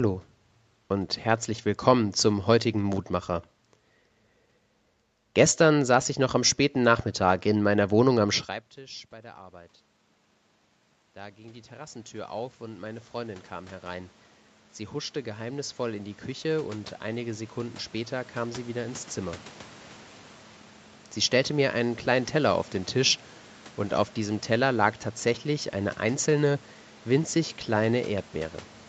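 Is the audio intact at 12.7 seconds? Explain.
No. At 12.7 seconds the sound is in the middle of an automatic gain rising span running from 9.11 to 27.4 s. The level at the microphone dropped by about 22 dB once the talker moved back around 8.5 s, and the gain control responded by slowly adding about 21 dB. Unlike a talker simply moving closer, the room noise swells along with the voice, and the rise is a steady climb over many seconds.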